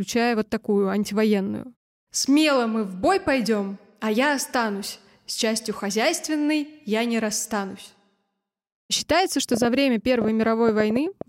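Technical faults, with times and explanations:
9.54–11.22 s, train of clicks: about ten sharp clicks at roughly 6.6 per second, unevenly spaced, ticking over the speech at about 10 dB above it. The repeated, similarly shaped pulses likely come from nearby electrical interference or a faulty connection or power supply.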